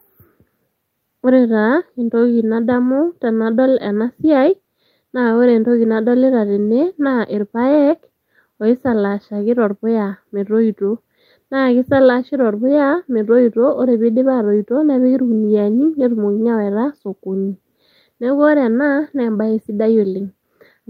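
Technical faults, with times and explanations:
No technical faults are present in this recording; the signal holds steady with nothing breaking into it at any point.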